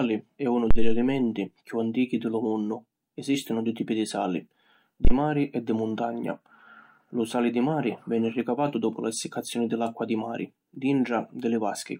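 Two phantom power thumps strike the speech, at 0.71 to 1.10 s after "è unu" and at 5.05 to 5.12 s after "dui tipi di sali". Each comes from a supply switching on or off on a live input, pushing a step through the coupling capacitors. It is heard as a deep thud peaking around -8 dBFS and decaying over 87 ms, then 17 ms. On a waveform this appears as a large offset swing; on a spectrogram, a low-frequency bright smear.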